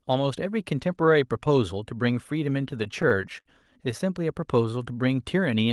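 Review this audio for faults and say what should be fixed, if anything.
There's a stretch of repeated stalls (stutter) between 2.71 and 3.47 s: eight short hitches, the longest about 51 ms, adding roughly 120 ms of held-over sound, about a sixth of that span. Packets were arriving late, so the jitter buffer kept running dry, and each time the receiver stretched out the last bit of sound until fresh audio turned up. Nothing is lost, but the speech drags and judders there. The Opus call path cuts off the top end at 12 kHz. To prevent it, give the jitter buffer more headroom or fix the network delay variation feeding it.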